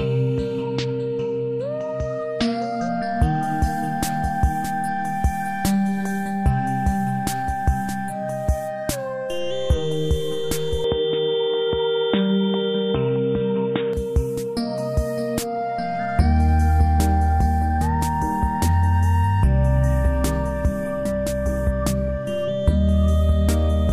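From 10.84 to 13.93 s the input likely switched to a poorer device, cutting everything above 3.8 kHz; the sound turns dull and boxy over faint new noise.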